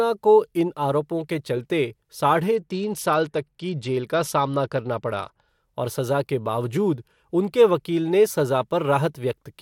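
From 2.55 s to 5.48 s the speech goes through a Bluetooth SBC bit pool drop. The link appears to have congested, and the encoder cut its bit budget, with the sound pointing to a fall from a bit pool near 31 to about 11, roughly 83 kbps. The upper sub-bands lose their bits, so the treble dulls, and coarse quantisation adds a gritty noise. Unlike a dropout, the audio never stops; it stays continuous but degraded until the rate recovers.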